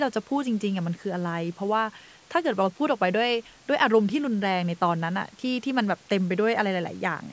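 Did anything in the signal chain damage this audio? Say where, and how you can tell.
No, the speech shows no damage from any stage of the chain; it has passed through normal call microphone processing, whose high-pass filter trims only the lowest bass, and the band stops at 8 kHz.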